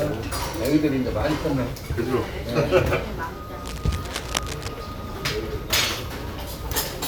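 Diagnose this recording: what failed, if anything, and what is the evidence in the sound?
Cable scratch noise, from 3.65 s to 4.68 s, sits at the analogue wiring stage: dense, irregular scratching and rustling over the sound, roughly 10 dB below it. The likely cause is a worn cable or connector being moved, its contact resistance fluctuating. Unlike isolated digital clicks or dropouts, the bursts are continuous and uneven, and the sound itself never cuts out.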